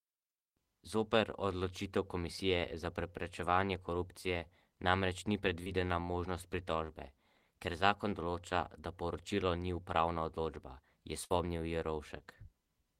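At 5.63 to 5.74 s there is short concealed packet loss: about 20 ms of speech arrived too late to decode, so the receiver extended the preceding sound for 23 ms and dropped 11 ms while rejoining the real audio, leaving a brief smear.

A burst of packet loss follows at 11.25 to 11.32 s. About 60 ms went missing, covered by 53 ms of continued, fading sound. Speech then resumes further along, with that stretch gone.

A second short concealed packet loss at 12.18 to 12.22 s replaces 20 ms with 18 ms of extrapolated sound, heard as a brief wobble.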